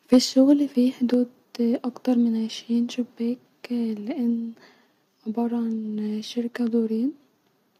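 The microphone input was likely set too high for this speech clip, so from 0.13 to 0.18 s the peaks drive the converter about 4 dB past its limit. Around one sample in seven is flattened, and that microphone overload gives the loudest syllables a harsh, crackling edge. The call software likely reacted by turning the device's input volume down in single steps, which is heard as the microphone volume stepped down: the voice and background drop about 2 dB at 0.14 s, then about 4 dB more at 1.14 s, just before "اكتر من عشرين".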